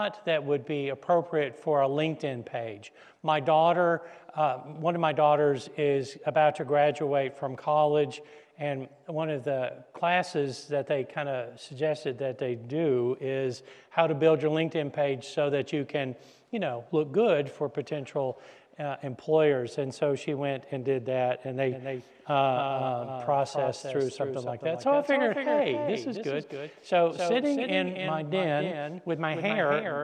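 From 21.7 s to the end, a doubled audio track appears. A second full-band copy trails about a third of a second behind, a few decibels quieter, likely from a slower second capture path. Unlike an echo, it starts abruptly, without decay or room colour.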